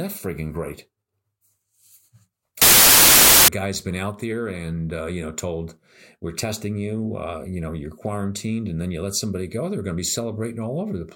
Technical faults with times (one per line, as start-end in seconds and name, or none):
2.62-3.48 samples built from the wrong bytes